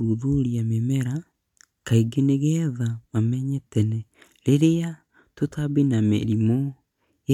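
No technical faults are audible.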